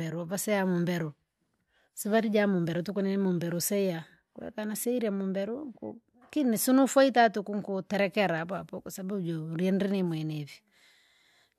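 Nothing in this speech recording stood out as a technical problem on listening.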